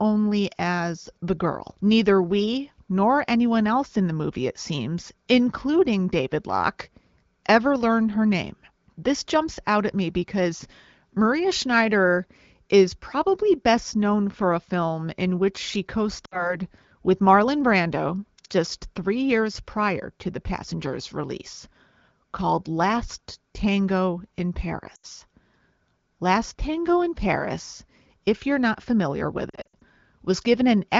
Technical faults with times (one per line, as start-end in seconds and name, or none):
16.25-16.56 lost AMR speech frames
24.95-25.05 lost AMR speech frames
29.50-29.83 lost AMR speech frames